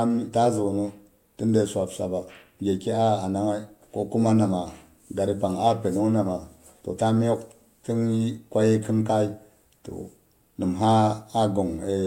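No technical faults can be heard anywhere in this recording. The speech runs without any break, dropout, glitch or distortion.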